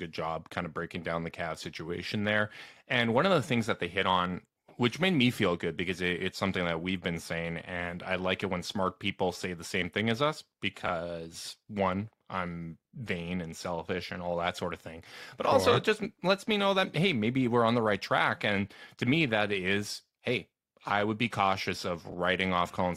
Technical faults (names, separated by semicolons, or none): frames out of order